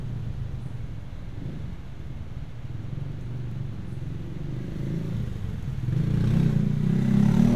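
A recording of everyday sounds whose signal carries no audible technical fault at any point.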